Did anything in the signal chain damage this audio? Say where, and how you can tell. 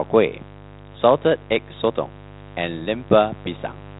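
Yes, in the analogue wiring. A steady, raspy mains buzz at 50 Hz runs under the speech for the whole clip, roughly 20 dB below it. Switching spikes from a dimmer, rectifier or poor shielding inject a dense 50 Hz harmonic series, which the codec's 3.8 kHz band limit then truncates.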